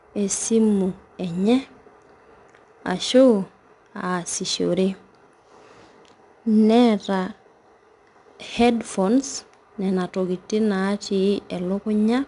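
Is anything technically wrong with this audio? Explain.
Yes. Throughout the speech, 4-bit ADPCM compression leaves a plainly audible gritty hiss on loud syllables; a spectrogram shows level-following broadband noise, with nothing above 10.6 kHz.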